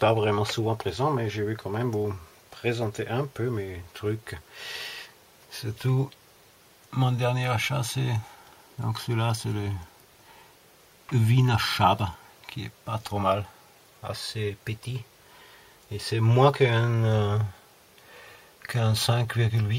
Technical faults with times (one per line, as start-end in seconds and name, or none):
none